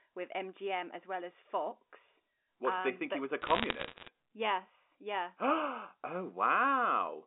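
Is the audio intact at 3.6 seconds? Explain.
No. From 3.42 to 4.08 s there are bit errors on the digital phone line. Roughly one bit in a hundred flips, each corrupting a single sample, producing sharp ticks and crackle over the speech. The waveform shows isolated one-sample spikes, and the spectrogram shows thin vertical broadband streaks.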